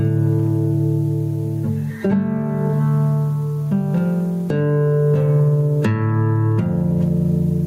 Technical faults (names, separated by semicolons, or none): gain pumping